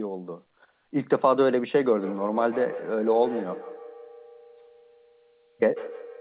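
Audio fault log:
1.97–6.20 s, feedback echo between two devices: from 1.97 s the sound returns at an interval of about 150 ms, repeating thinner and more ringing, peaking about 14 dB below the direct sound. A second device plays the call back into the open microphone, outside that echo canceller's reach.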